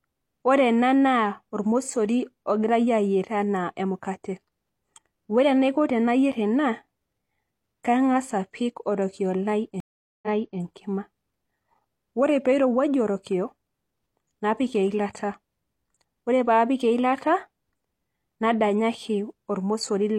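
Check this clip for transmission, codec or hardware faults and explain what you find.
A stream reconnect occurs from 9.80 s to 10.60 s. The connection dropped, so the player fell silent, re-established the link and started a new decoder partway through the stream. The server resent a buffered burst, so after about 0.42 s of silence the speech resumes roughly 0.37 s earlier than where it cut off, and that short stretch is heard a second time. The first frame after the restart fades in.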